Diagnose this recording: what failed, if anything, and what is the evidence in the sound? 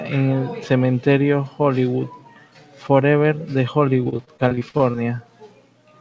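Repeated packet loss on the network from 4.04 to 4.97 s: gaps up to 48 ms were patched by extending the preceding sound, producing choppy, robotic speech.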